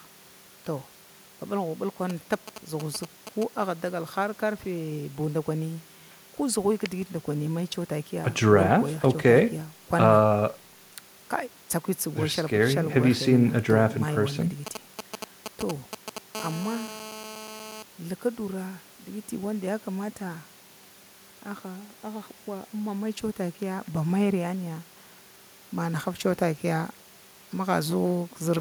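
A galloping dit-dit-dit of short raspy buzzes cuts into this speech recording from 2.10 to 3.44 s, and again from 14.67 to 16.18 s, where it is louder, roughly 5 dB under the speech against roughly 10 dB under in the first stretch. These are GSM signalling bursts: a 2G phone close to the recording chain is sending brief clusters of transmissions, as it does before a call or text arrives, and the audio circuitry rectifies each radio pulse into a 217 Hz buzz. Straight after, from 16.35 to 17.83 s, the pattern becomes a continuous, hard, harmonic-rich drone at 217 Hz, about 10 dB below the speech and unrelated to it. That is GSM phone buzz: a handset is now transmitting steadily as in a call, firing its time-slot bursts 217 times a second, and the demodulated pulse train sits in the audio as an unbroken buzz.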